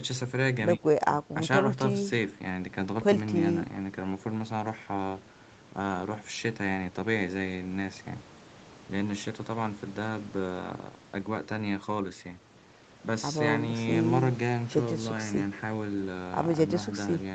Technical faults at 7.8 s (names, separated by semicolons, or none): none